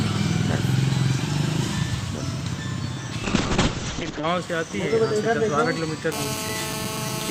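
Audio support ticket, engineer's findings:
Call bitrate drop, 3.26–4.33 s. Bandwidth estimate collapsed; encoder starved, sounding like roughly 64 kbps falling to about 6 kbps, bottoming for about 1 s. Audio band narrows from 20 kHz to 8 kHz. Coarse, rough, muffled sound until recovery.

GSM phone buzz, 6.12 s to end. Points to a nearby 2G handset on an active call, its RF bursts rectified in the audio chain. Hard, raspy 217 Hz buzz with dense harmonics, steady, about 6 dB below the signal, unrelated to content.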